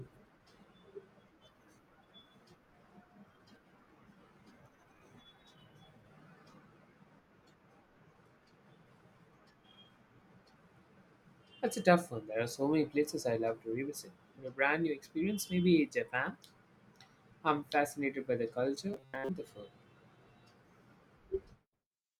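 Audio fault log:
18.94–19.29 s, robotic sound from repeated short buffers: between "I'm fascinated by the" and "the food", new audio likely stopped arriving in time, so playback kept looping a tiny slice it already held while the real audio was skipped. The loops recur 134 times a second, which fits a slice of about 7.5 ms. That fixed rate lays a rigid, metallic 134 Hz buzz over most of the stretch, with the speech only loosely traceable underneath.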